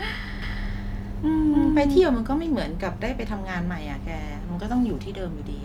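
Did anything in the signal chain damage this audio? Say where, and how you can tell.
Yes. From 0.42 s to 2.00 s a doubled audio track is audible. A second full-band copy trails roughly 300 ms behind, at about the same level, with no decay or room colour. It starts and stops abruptly. This likely comes from a slower second capture path or an out-of-step edit.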